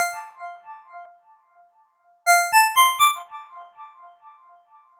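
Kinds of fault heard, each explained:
Skip ahead: At 1.05 s the sound jumps forward with no gap. About a second of audio never plays. The receiver discarded that stretch while later audio was already queued, so the delay shrank at once by roughly the same amount. The two sides of the cut are butted together directly. Nothing fills the join, so the sound before and after meet abruptly, as if a piece had been snipped out of a tape.
Jitter buffer speed-up: From 2.61 s to 4.96 s the sound runs fast, at about 119% of normal speed. The pitch does not rise. The buffer was holding more audio than its target, so the receiver trimmed many short pieces, one or a few pitch periods each, one after another. Over this stretch roughly half a second is taken out. The result sounds hurried, and any steady rhythm is pulled forward.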